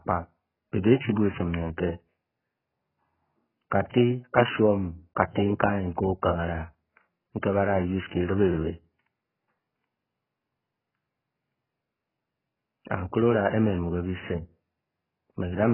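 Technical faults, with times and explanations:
Throughout, AAC compression: the speech is heavily damaged, with nothing above 3.1 kHz, leaving it dull and smeared, with a warbling, fizzy texture on held vowels and sibilants. The likely cause is AAC-LC at a very low bitrate, which fits about 8 kbps. With so few bits for each 1,024-line frame, the encoder discards the upper band entirely and quantises the rest coarsely, leaving spectral holes and substitute noise where detail was.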